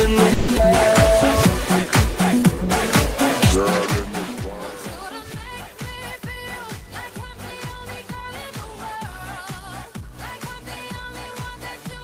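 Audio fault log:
0.33–0.50 s, call audio freeze: the sound stalls into a fading buzz for 150 ms, then resumes where it stopped, likely packets held up while the jitter buffer ran empty.
0.56 s, skip ahead: playback lurches forward with almost no gap, about 70 ms of audio dropped because later packets were already waiting.
1.66–2.59 s, jitter buffer slow-down: the sound drags at 93% speed with unchanged pitch, as repeated pitch periods add 71 ms to rebuild the buffer's reserve.
5.96–6.23 s and 7.79–8.98 s, jitter buffer speed-up: the sound speeds up to 114% then 103% speed, same pitch, each time roughly 50 ms of short pieces cut to shrink an overfull buffer.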